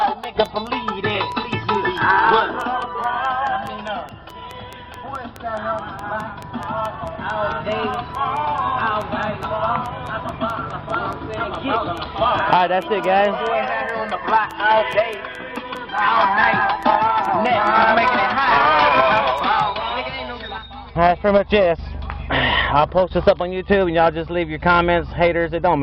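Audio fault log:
0.02–19.61 s, train of clicks: A steady ticking rides over the sound at 4.7 clicks per second, evenly spaced, around a hundred in all, and each peaks roughly 5 dB above the surrounding audio, so they stand out even in quieter stretches. Every click has much the same sharp shape, which points to one repeating source, likely electrical interference from nearby equipment or a faulty connection or power supply.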